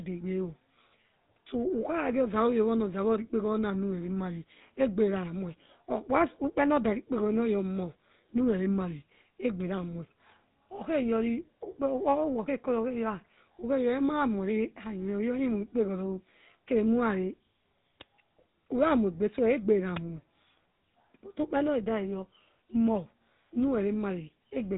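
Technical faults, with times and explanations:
Throughout, GSM full-rate codec: the speech went through the original GSM phone codec, which rebuilds the vocal tract from a sparse pulse excitation, consistent with a 13 kbps rate. Nothing survives above 3.8 kHz, leaving the speech dull, with a plainly audible buzzy, gravelly roughness.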